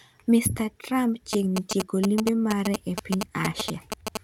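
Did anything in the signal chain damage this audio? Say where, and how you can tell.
Yes: GSM signalling bursts entered the analogue wiring from 1.33 s to 4.17 s. A nearby 2G phone's bursts were rectified into galloping short buzzes at 217 Hz, roughly as loud as the speech, showing as clustered vertical streaks with 217 Hz harmonic stripes.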